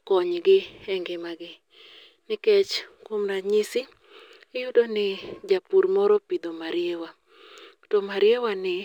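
Imaging from linear upsampling runs throughout the speech. The rate was apparently raised by joining samples with straight lines, pointing to a 22 kHz-to-48 kHz conversion. The top end is dulled, and a mirrored image from 11.03 kHz to 22.05 kHz, roughly 40 dB down, adds faint metallic shimmer to sibilants.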